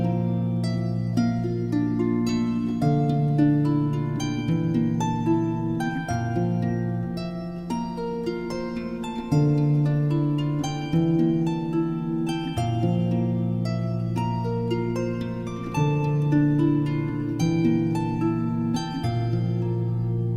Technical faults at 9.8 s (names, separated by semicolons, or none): none